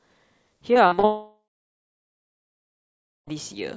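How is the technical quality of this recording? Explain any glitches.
The recording has two serious faults in quick succession, both network-related, on a speech signal whose content stops at 8 kHz, which fits a wideband call codec such as G.722.

Repeated packet loss (robotic sound), 0.74 to 1.05 s: four short gaps, the longest 44 ms, with about 120 ms of audio missing in total. Each gap was bridged by extending the preceding sound, so roughly a third of this stretch is synthetic fill. This gives the speech a choppy, robotic quality with fragments missing.

Long network dropout, 1.05 to 3.29 s: this is most likely a dropout where audio stopped arriving for over two seconds. The last sound is stretched into a fading buzz or hiss, after which about 1.85 s of silence follows before audio resumes. The speech from that entire span, roughly 2.2 s, is missing and is not recovered when the audio returns.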